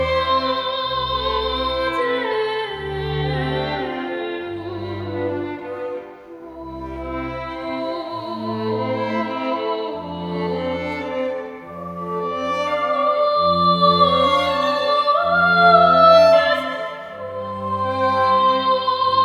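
No audible dropouts, clicks, level jumps or other transport glitches turn up anywhere in the recording.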